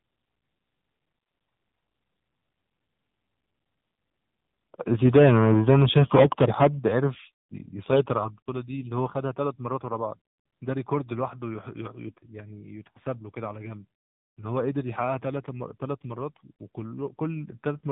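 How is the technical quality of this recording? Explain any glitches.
The technical quality is limited. The whole recording passes through an AMR narrowband mobile codec, and one short burst of AMR bit errors damages it near 12 s.

The AMR narrowband coding runs throughout. Nothing above 4 kHz survives, so the speech sounds thin and boxed in. The codec rebuilds the voice from a vocal-tract model excited by a few pulses per subframe. The damage is plainly audible, with a buzzy, synthetic edge that fits a low mode around 7.4 kbps.

The AMR bit errors run from 12.06 to 12.19 s. That span points to nine damaged frames, with a couple of percent of bits flipped. The protected core bits arrived intact, so pitch and loudness roughly hold. The weaker bits did not. The excitation pulses fall in the wrong positions, and the fine gain and spectral values drift. The voice turns hoarse, scratchy and gargly for that moment.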